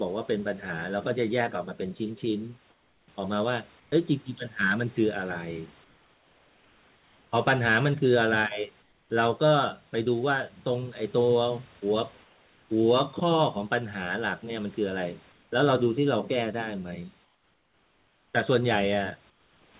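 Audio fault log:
2.70–3.08 s, 3.80–3.92 s, 5.84–7.32 s, 8.82–9.10 s, 12.24–12.70 s, 15.32–15.52 s, 17.24–18.34 s, 19.30–19.74 s, comfort noise in place of the background: during speech pauses the sender likely stopped transmitting and the receiver filled the gaps with synthetic noise. The textured room background turns into flat, featureless hiss, about 4 to 7 dB quieter, until speech resumes.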